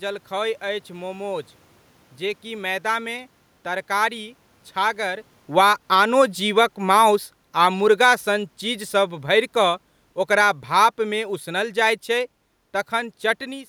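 Right after "जेकि मैदामे तरकारी", at 4.77 s, the automatic gain falls: the gain control judged the level too hot and eased it down by about 6 dB through 8.58 s, so the speech and the room noise behind it sink together. Within that, from 5.81 to 6.46 s, the automatic gain rises by about 4 dB, lifting both again. That's probably the control reacting when the talker drifts off the mic around five seconds. After "चीज सभ", from 9.24 to 12.38 s, it pulls down another 4 dB or so, with the same slow, shared sag of speech and background.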